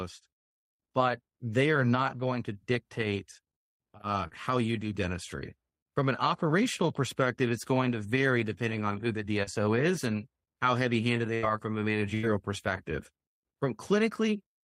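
A speech recording with two short smears, at 4.27 to 4.33 s and 9.43 to 9.49 s, where the sound briefly wobbles and blurs before settling. Each is short concealed packet loss: about 40 ms of audio never reached the decoder in time. The receiver covered the hole by extending the preceding sound for under 40 ms, then blended back into the real signal. Later, at 11.35 to 11.45 s and again at 12.15 to 12.25 s, the sound hangs as a held, fading buzz or hiss before picking up slightly further on. These are bursts of packet loss, each about 80 ms. The receiver kept continuing the last sound and letting it decay across the gap, so the material in between is simply missing when normal playback resumes.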